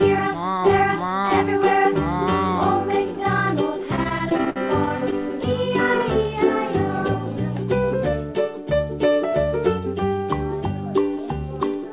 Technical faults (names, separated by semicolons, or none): repeated stalls (stutter)